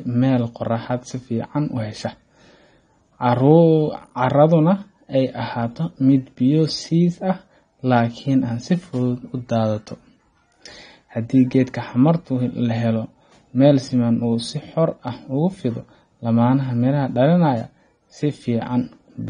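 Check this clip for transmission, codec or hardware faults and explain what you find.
One codec fault runs through the whole clip.

AAC compression, likely from an AAC-LC encoder, affects the full length of the speech. Nothing is present above 9.7 kHz, which fits a stream at around 32 kbps. The encoder quantises each frame's frequency lines coarsely and discards the top band. The speech sounds dull and smeared, with a fizzy edge on sibilants. The damage is plainly audible.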